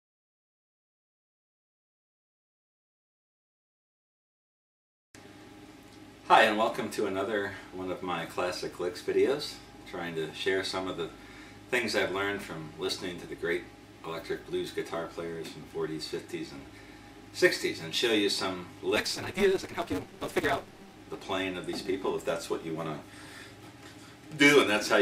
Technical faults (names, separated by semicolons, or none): block size mismatch (truncated)